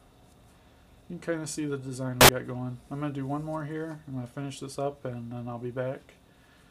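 At 2.21 s a burst of loud, harsh broadband noise cuts in and lasts until 2.29 s, about 80 ms. This is samples built from the wrong bytes: the reader assembled each sample with its bytes misaligned or swapped, so the rapidly changing low-order bits landed in the high-order position. On a waveform the section becomes a dense block of large, random-looking values; a spectrogram shows broadband energy filling every frequency for that stretch.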